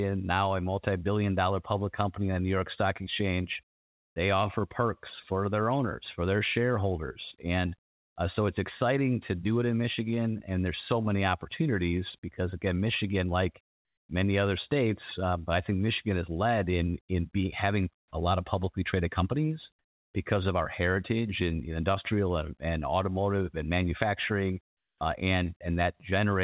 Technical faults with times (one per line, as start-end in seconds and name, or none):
7.85-8.15 comfort noise in place of the background
13.67-14.09 comfort noise in place of the background
17.99-18.11 comfort noise in place of the background
24.68-25.01 comfort noise in place of the background